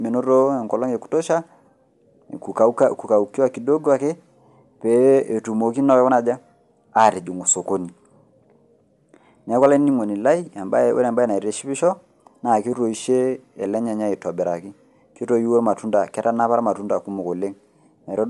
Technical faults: Bluetooth LC3 compression

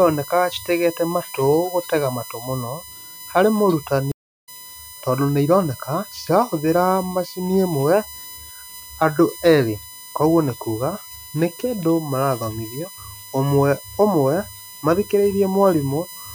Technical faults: USB whine; stream reconnect

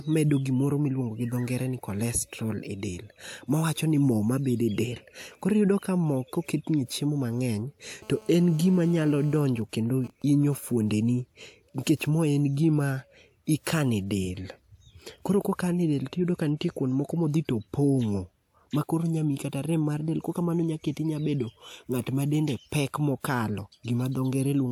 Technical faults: GSM phone buzz; GSM signalling bursts

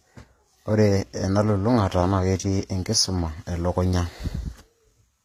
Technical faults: HE-AAC compression

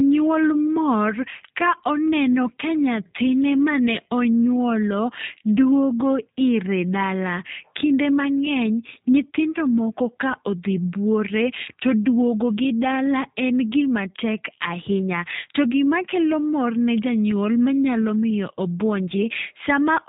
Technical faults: G.729 codec

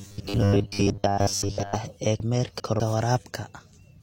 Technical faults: robotic sound from repeated short buffers; chunks out of order

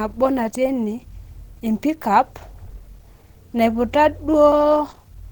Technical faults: Opus compression

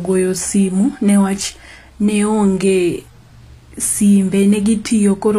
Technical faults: HE-AAC compression

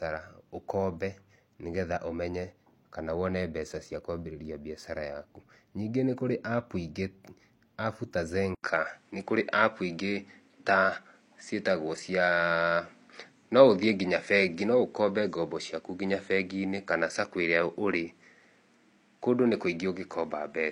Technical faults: input switched to a poorer device

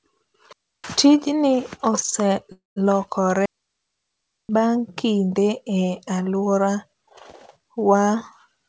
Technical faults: digital wireless dropout; call audio freeze

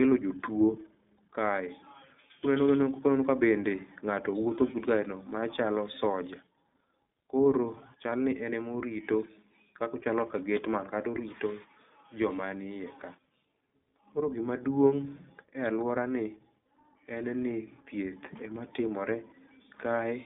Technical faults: iLBC codec

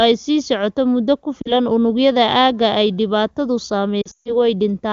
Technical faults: lost AMR speech frames

